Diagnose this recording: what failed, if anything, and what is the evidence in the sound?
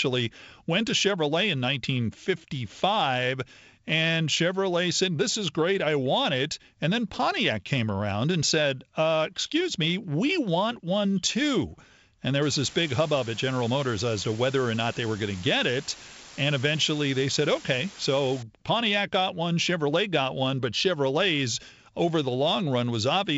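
Sample-format conversion failed from 12.42 to 18.43 s: a constant, even hiss appears, only about 15 dB below the speech, with no distortion. This is low bit depth with dither. The sound fits a 6-bit path, where dither turns the rounding error into steady white noise. The G.722 wideband band limit near 7.7 kHz remains audible throughout.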